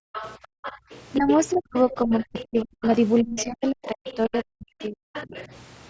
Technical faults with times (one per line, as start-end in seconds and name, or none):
0.00-0.90 background gated by the echo canceller
0.13-5.47 other side's voice leaking through
1.18-5.07 speech suppressed in double talk